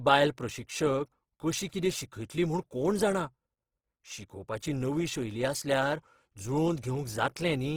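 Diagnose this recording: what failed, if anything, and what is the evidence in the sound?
Grainy, rough texture throughout the speech, bandwidth still reaching 20.4 kHz: the codec stage, likely Opus compression in CELT mode, fitting about 16 kbps.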